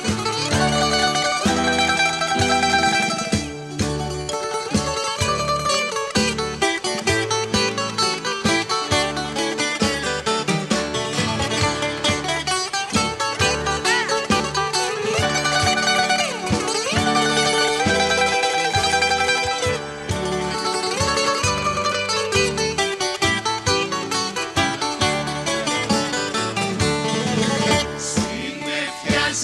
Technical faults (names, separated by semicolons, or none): burst of packet loss